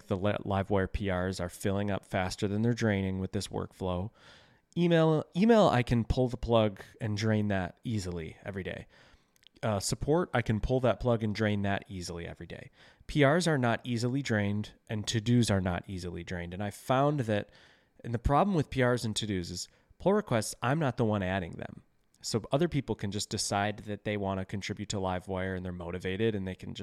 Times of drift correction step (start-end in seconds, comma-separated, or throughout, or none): 10.03-10.94, 23.64-24.22